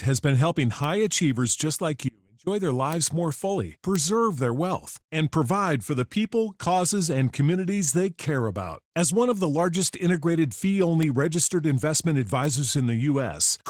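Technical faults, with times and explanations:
Throughout: Opus voice compression. The speech has been through Opus at about 16 kbps in hybrid mode, with SILK's linear-prediction coder carrying the lower band and a CELT layer adding the content above 8 kHz, in 20 ms frames. At that rate the excitation is coded coarsely, so the speech sounds plainly processed: slightly hoarse and a little robotic, with the upper band thin and approximate even though the band is still fullband.
0.84 s, 2.93 s, 3.96 s, 11.03 s and 12.45 s: bit error spike. Each is a single sharp tick that has nothing to do with the speech around it. At 3.96 s it falls between "more fully" and "their wealth and provide", and at 11.03 s between "the largest integrated fee" and "registered investment". The tick at 12.45 s comes just after "registered investment". A flipped bit makes one sample, or at 11.03 s two in a row, jump by a power of two and snap straight back. 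That impulse spreads energy across the whole spectrum, which is why each one is heard as a click.
2.09 to 2.47 s: audio dropout to a faint residue. For about 380 ms the speech cuts out abruptly, mid-flow, and returns just as suddenly. The gap is not silent, because a faint trace of sound remains at roughly 35 dB below the normal level. The hard edges distinguish it from a natural pause or a fade. The likely cause is a break in the wanted signal while the path after the break stayed live and kept passing whatever leaked through.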